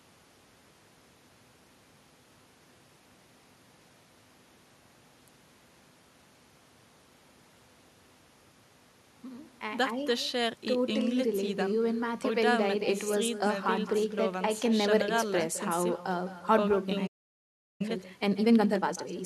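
Throughout the speech, an echo with no canceller trails every phrase. A quieter, thinner copy returns about a fifth of a second later, roughly 13 dB down. At 17.07 s a playback stall cuts the sound to silence for about 0.73 s, until 17.81 s. The player likely ran dry or was blocked. From 17.81 s to 19.15 s, time-compressed catch-up follows. Small pieces are cut and cross-faded, so the audio runs 1.5 times fast at normal pitch.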